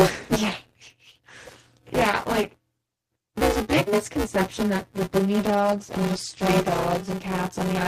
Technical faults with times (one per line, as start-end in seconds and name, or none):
0.00-7.87 buffer tearing
5.49-7.27 call bitrate drop